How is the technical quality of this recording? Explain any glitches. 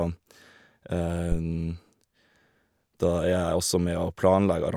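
A single glitch stands out in the speech, at 1.32 to 1.38 s: a phantom power thump. It lands as a deep, blunt low-frequency knock, peaking at about -14 dBFS, and it dies away quickly, with a decay of around 14 ms. The cause is a supply such as phantom power being switched on or off on a live input. The sudden voltage step passes through the coupling capacitors and reaches the recording as this brief bass pulse.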